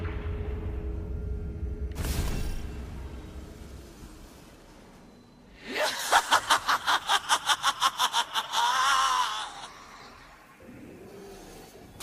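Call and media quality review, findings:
Lost LE Audio frames at 3.96 to 4.06 s, and a brief smear at 8.56 s. The first is about 70 ms of gaps in runs up to roughly 30 ms, fitting 10 ms frames. The decoder's concealment repeats the last spectrum with random signs. Tones blur into noise.

Pre-emphasis left on from 5.99 s to the end. The treble is lifted about 8 dB at 10 kHz relative to 1 kHz, matching the CD 50/15 µs curve. The de-emphasis stage was skipped, so the audio is thin, bright and sibilant.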